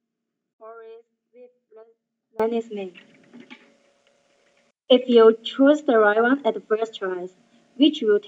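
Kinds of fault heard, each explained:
Audio dropout to a faint residue, 0 to 2.40 s: the audio is already missing when the clip begins, and only a faint leak of sound, roughly 25 dB below its normal level, fills the first 2.4 seconds before the full signal returns abruptly rather than fading in. This is likely a break in the wanted signal upstream while the chain after the break stayed live, passing through only a weak residue instead of true silence.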